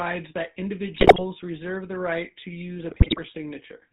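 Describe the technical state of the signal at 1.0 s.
At 1.0 s the speech is inside a burst of GSM bit errors running from 0.98 to 1.24 s. Corrupted bits reach the decoder, so the filter, pitch and gain values it rebuilds each frame are wrong: the spectrum bends and the level jumps, giving squawks, pops and a gargling break-up. Unlike packet loss, nothing goes silent or repeats. The sound keeps running but turns briefly grotesque across roughly a quarter second of frames.

Underneath, the GSM full-rate codec colours the whole clip. It models the vocal tract and excites it with regularly spaced pulses, keeping only a third of the excitation detail, and cuts everything above 4 kHz. The result is a plainly audible buzzy, gravelly roughness, which fits the 13 kbps full-rate coder. A plain 4 kHz low-pass would only sound dull, not buzzy. This roughness is steady, while the errors at 1.0 s come and go.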